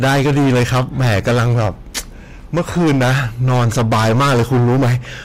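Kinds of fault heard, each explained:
Hard clipping: The speech is driven about 16 dB past what the signal path can pass, so the peaks are sliced flat at the limit. The overload is heavy and lasts the whole clip. Roughly 30% of the samples are cut flat at the clipping limit. Those flat tops create strong harmonics high in the spectrum. The result is a harsh, buzzing fuzz on every loud syllable, not just occasional crackle on the biggest peaks.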